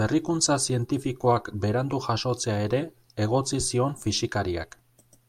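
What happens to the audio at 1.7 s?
Nothing goes wrong at 1.7 s: the speech there is intact, with no dropout, click, distortion or other fault.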